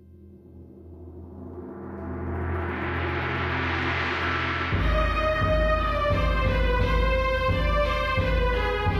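No technical faults are audible anywhere in this recording of sounds.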